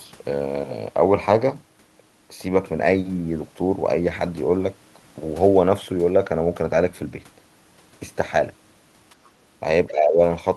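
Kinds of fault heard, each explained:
Speech suppressed in double talk: Near 9.88 to 10.2 s the speech dips by roughly 15 dB. An echo canceller likely turned it down while both sides talked.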